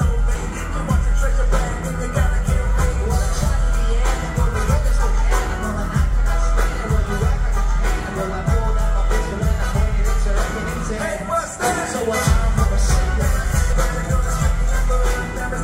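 At 0.35 s and again at 13.73 s there is a brief glitch, each time the mark of damaged data in a compressed stream. Some bytes in the encoded stream are wrong at those points, so the decoder cannot read the affected frames correctly, loses frame sync and scans forward for the next valid header before resuming. Each disturbance is momentary, a short glitch cutting into the sound rather than a sustained dropout.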